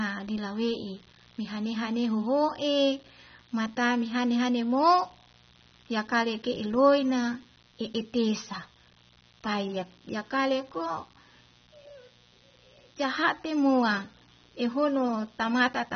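Throughout the recording, switching spikes from a dimmer, rectifier or poorly shielded line leak into the signal as mains buzz, built on 60 Hz and its harmonics. It sits about 35 dB below the speech, a constant raspy hum running under everything.

The speech has also been through a lossy codec, likely AAC compression at a low bitrate, which fits something near 24 kbps. Nothing survives above 6.3 kHz, so the audio sounds dull and band-limited, and coarse quantisation leaves plainly audible smearing and warble.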